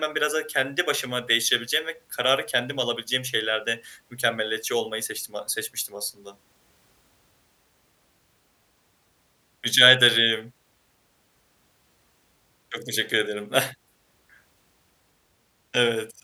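No technical faults can be heard anywhere in the speech recording, and the signal stays continuous and steady throughout.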